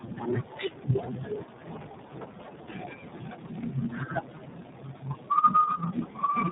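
Throughout the speech, tandem speech coding is audible: the sound appears to have been decoded and re-encoded by three different speech codecs, each adding its own distortion to the last. Unlike a single low-bitrate coder, the roughness, muffling and warble build up together, with nothing above 3.8 kHz.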